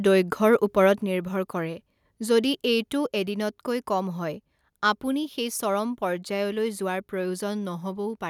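A brief harsh crackle on the loudest peak from 0.53 to 0.55 s is microphone overload, likely from input volume set so high that the peak tops were clipped, about 1 dB over. At 1.02 s, just before "নিৰ্ভৰ কৰে", the speech and background drop abruptly by about 5 dB, and at 3.06 s, between "যদি এইটো" and "এদিনতকৈ কম হয় আপুনি", they drop again by about 2 dB. Both are the microphone volume stepped down, likely the call software lowering the input level after detecting overload.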